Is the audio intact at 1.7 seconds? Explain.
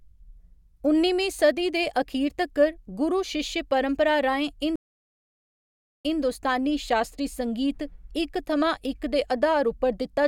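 Yes, the speech at 1.7 seconds is intact, with no dropout, click, distortion or other fault at that moment.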